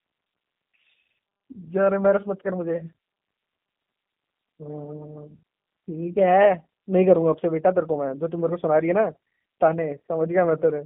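G.729 codec damage runs throughout: speech rebuilt from a vocal tract filter, pitch predictor and sparse pulses sounds rough and synthetic, with nothing above 3.6 kHz.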